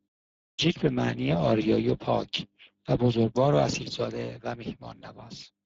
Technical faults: Speex codec; clipped start after a pause; one channel drops out

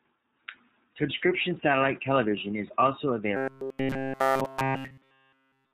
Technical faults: iLBC codec; lost iLBC frames; robotic sound from repeated short buffers

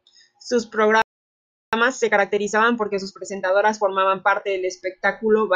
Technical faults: playback stall; time-compressed catch-up

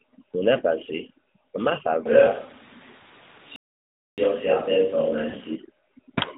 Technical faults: lost AMR speech frames; playback stall

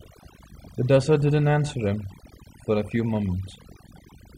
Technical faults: overdone noise removal

